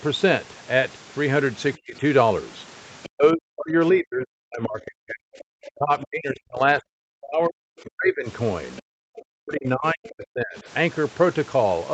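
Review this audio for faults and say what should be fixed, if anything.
The speech is suppressed in double talk three times: 1.76–1.98 s (a drop of roughly 30 dB), 3.09–8.28 s, and 8.81–10.67 s (drops of about 40 dB in both). The voice ducks, most likely because the echo canceller could not tell the talker from loudspeaker echo while both sides spoke, so it attenuated everything. On a waveform these stretches show a collapsed envelope. A spectrogram shows the harmonics thinning or vanishing in gaps.

The other side's voice is leaking through at 3.03–3.09 s, 5.39–6.05 s, 9.17–9.22 s and 10.07–10.12 s, roughly 20 to 25 dB below the talker. These are faint scraps of a second voice, most likely loudspeaker playback that the echo canceller left in the microphone signal. On a spectrogram they show as weak, separate harmonic traces that do not follow the talker's pitch. The longest sits inside the suppressed middle section. 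The brief ones appear as small bursts in the waveform. The whole clip sits under the 8 kHz band edge of the call path.

To prevent both problems, use a headset or better acoustic isolation, and use an echo canceller with stronger double-talk detection, so that less echo reaches the microphone and the near talker is no longer suppressed.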